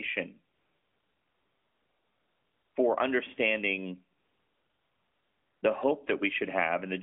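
From 0.54 to 2.76 s, and again from 4.18 to 5.62 s, you get AMR comfort noise. The phone decided nobody was talking and stopped sending speech frames for about 2.2 s and then 1.4 s. The far end papered over each gap with synthetic hiss built from a rough level-and-spectrum sketch. So the real background drops out, replaced by a smooth, even noise that switches in and out, all squeezed into the narrowband 200 Hz to 3.4 kHz line.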